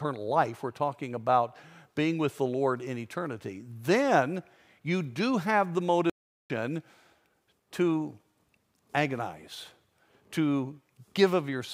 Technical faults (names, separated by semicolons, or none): playback stall